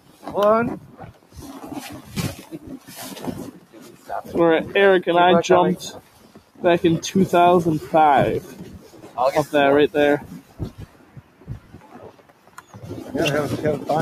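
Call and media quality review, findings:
Noise suppressor applied to music or sounds, whole clip: level pumps and thins, swings of around 15 dB. Probable component: a speech noise suppressor left enabled. It treats steady, sustained content and tails as noise and ducks them while onsets pass. Unlike AGC pumping, the gain tracks how steady the sound is, not overall loudness. Unlike codec dropouts, the sound sinks and recovers smoothly, with no gaps or smearing.

Sound cut by the noise suppressor, at 0.0–0.25, 0.82–1.36, 2.38–2.9, 3.51–4.09, 5.98–6.61, 8.42–9.17 and 10.21–12.78 s: held portions sag, deepest by about 9–11 dB. The longest span, 10.21–12.78 s, keeps sinking for about 2 s. Same suppressor misreading sustained sound as noise. Attacks survive while decays are clipped short, unlike a gate or mute, which cut everything at once.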